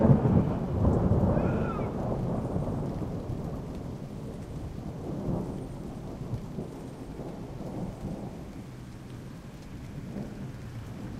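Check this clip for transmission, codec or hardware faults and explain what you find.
No faults turn up when this clip is checked.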